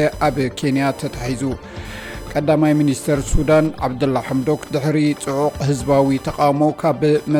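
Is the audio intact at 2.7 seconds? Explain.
No. At 2.7 seconds a buzzing, chirping whine pulsing at roughly 1 kHz sits about 25 dB below the sound, as it does throughout. This is computer activity noise: processor, graphics or mouse load shifts the audio circuit's shared ground.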